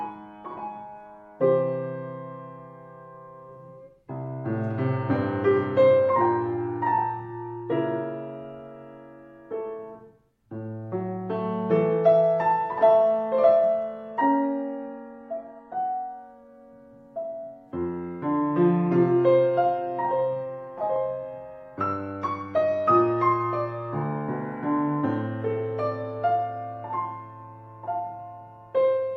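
Adaptive stream at a lower bitrate from 14.1 to 16.1 s: the audio abruptly loses clarity, with stronger codec artefacts, then snaps back, with no gap at either edge. This fits the player briefly switching from a high-bitrate AAC version to a much lower-bitrate HE-AAC one.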